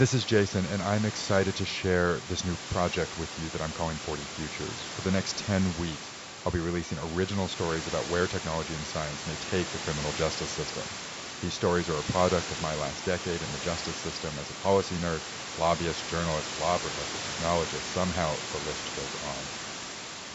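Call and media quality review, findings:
No findings: call and media quality review shows no faults in the speech.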